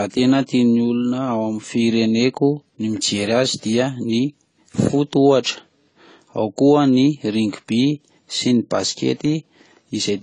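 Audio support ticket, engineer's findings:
Low-bitrate audio saved at a high bitrate, throughout the speech. Nothing above 10 kHz, with the first pass's low-rate artefacts baked in. The likely cause is a roughly 24 kbit/s AAC source re-encoded to a 215 kbit/s MP3, so the bigger file can't bring back what the first pass threw away.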